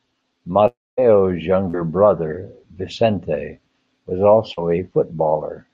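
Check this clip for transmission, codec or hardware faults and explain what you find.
The clip has two kinds of transmission fault, both from packets failing to reach the receiver.

From 0.67 to 0.99 s there is a long network dropout, likely a network stall. About 300 ms of speech is lost and replaced by a fading continuation that gives way to roughly 230 ms of silence.

At 1.69 to 1.75 s and 4.53 to 4.59 s there is short concealed packet loss. In each case about 40 ms failed to reach the decoder, and the receiver extrapolated over the hole, leaving a brief smear or wobble in the speech.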